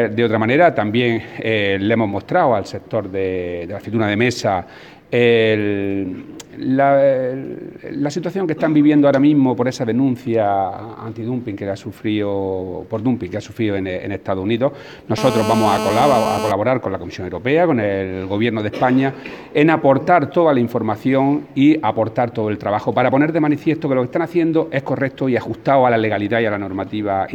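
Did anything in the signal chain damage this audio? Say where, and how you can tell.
Yes. GSM phone buzz enters the analogue wiring from 15.18 to 16.52 s. A hard, raspy buzz at 217 Hz with many harmonics sits about 4 dB below the signal, steady throughout. A nearby phone on a call bursts 217 times a second, and the circuit rectifies those pulses.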